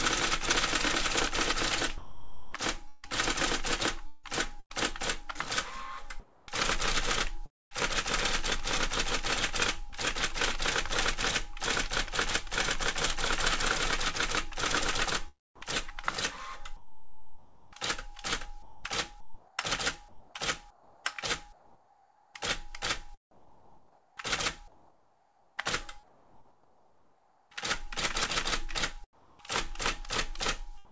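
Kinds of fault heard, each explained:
Sound chopped by the voice detector: from 1.98 to 4.72 s, 6.20 to 9.94 s and 15.56 to 29.70 s, the sound is repeatedly cut and filled with synthetic comfort noise, which likely replaced about 1 s, 0.55 s and 6.3 s of material. Unlike a single dropout, the switching repeats throughout each stretch.
Sound dropped by the voice detector: at 29.13 to 29.39 s and from 30.85 s to the end, quiet sound gives way to one steady patch of comfort noise, likely because the detector judged it background. These are single gaps rather than repeated flickering, and about 110 ms and 30 ms of sound are lost.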